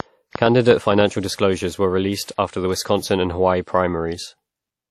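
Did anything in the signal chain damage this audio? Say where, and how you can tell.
Yes. The whole clip has a washy, ringing quality, with hiss that swells and falls along with the speech and nothing above 14.2 kHz. This is plainly audible codec damage, likely from WMA compression at a rate that fits about 48 kbps. At that rate the transform encoder spreads quantisation noise across long blocks and zeroes weak spectral lines. That causes the smearing, and the top band was discarded to save bits.

From 0.00 to 1.02 s there is a train of clicks, ending just before "disclosures were released after". There are roughly seven sharp ticks of similar shape, arriving about five per second at an uneven pace and standing around 15 dB above the speech. Because they are alike and repeat, they point to something injecting pulses from outside the signal. The likely stage is the analogue side, such as interference from nearby equipment, a faulty connection or a power supply fault.

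Pre-echo shows up as a short hiss just ahead of two attacks, which then sound soft and smeared. One runs from 0.28 to 0.33 s and spreads 47 ms. The other, from 2.36 to 2.38 s between "disclosures were released" and "after the", spreads 23 ms. This is the same codec stage at work. When an attack lands late in a transform block, noise sized for the loud part also fills the quiet lead-in before it.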